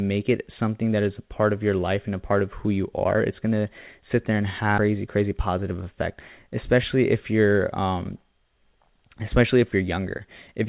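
At 4.78 to 4.80 s the speech makes a skip ahead: about 0.4 s of audio is simply gone, and the sound before and after is butted together with no gap or fill. On a waveform the envelope changes abruptly at that point, with no silence between; on a spectrogram the harmonic tracks and formants break off and resume at different positions, often visibly mismatched. The jump cut the queued delay by roughly the same amount, which fits a buffer discarding a backlog that had built up.

From 4.88 to 6.14 s a jitter buffer speed-up follows. The receiver repeatedly removed short slices one or a few pitch periods long, around 150 ms in total, so this stretch plays at about 109% speed while the pitch stays the same. It sounds rushed. A spectrogram shows syllables compressed in time while harmonic spacing is unchanged. The waveform shows periodic cycles spliced out many times in a row, with the usual G.711 band limit leaving nothing above 4 kHz throughout.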